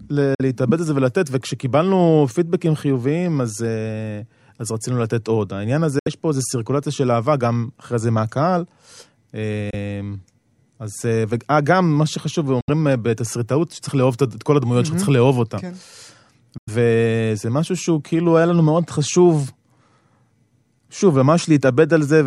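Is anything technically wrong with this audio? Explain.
Yes. Bluetooth dropout, likely, at 0.35–0.41, 5.99–6.08, 9.70–9.74, 12.61–12.70 and 16.58–16.69 s: packets missing their delivery deadline were discarded, leaving abrupt silent holes of 46, 70, 23, 70 and 93 ms. Then the speech resumes further on, as though it had continued underneath.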